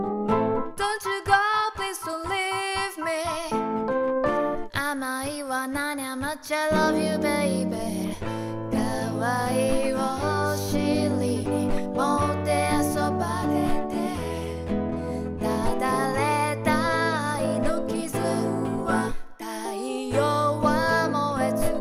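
No technical faults are audible.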